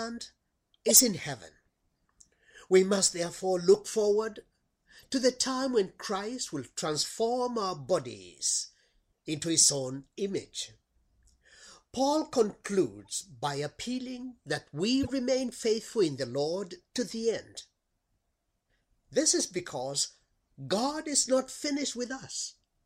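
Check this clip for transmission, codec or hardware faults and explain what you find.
Five short bursts point to a corrupt frame decoded fault at 0.88–1.00 s, 4.99–5.06 s, 9.61–9.69 s, 13.05–13.14 s and 15.03–15.11 s. In each, a few damaged compressed frames were played with wrong gains or codes, throwing energy to the wrong frequencies. The result is a chirp or noise blip, loudest near full scale at 0.88 s, strong at 9.61 s, and faint, about −50 dBFS, at 4.99 s. On a spectrogram each burst appears as a brief, frame-length block of misplaced energy, and on the waveform as a sudden spike or smear.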